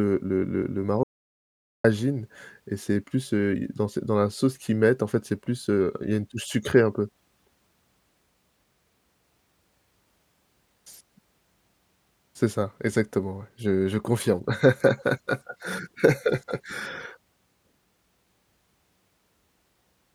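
At 1.03 s the speech cuts off abruptly in an audio dropout to silence lasting about 0.81 s, until 1.84 s. The input was likely lost while recording continued, writing silence. The waveform shows a flat line, the spectrogram a blank gap with no room tone.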